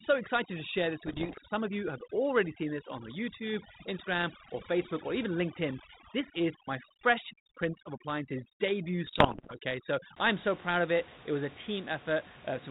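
A speech recording whose background drops to near silence dotted with twinkling specks from the start until about 10.16 s, just before "I'm so proud of". That is overdone noise removal. The reduction was set too aggressively against a room-noise floor sitting about 16 dB below the speech, so frequency bands close to the estimated noise were cut away along with the softer parts of the voice. Pops and short rough bursts, with brief jumps in level, break through from 1.06 to 1.39 s and again from 9.07 to 9.56 s. These are bit errors on an ADPCM link, at an error rate of roughly one to two percent. The link is a 32 kbit/s G.726 connection, whose sound is band-limited and lightly coded throughout. Each flipped bit throws the decoder's step size and prediction off track, so the damage keeps ringing for several milliseconds instead of staying a single click.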